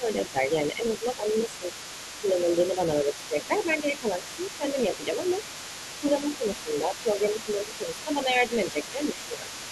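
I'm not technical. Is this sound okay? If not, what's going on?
No. At 0 to 1.7, 2.2 to 4.2, 4.6 to 5.3 and 6 to 9.5 seconds, the talker's voice keeps dipping and fading. This is speech suppressed in double talk, likely caused by an echo canceller turning everything down while both sides spoke at once. Throughout the clip, a fainter second voice sits underneath. That's the other side's voice leaking through, likely from a loudspeaker echo the canceller didn't fully remove.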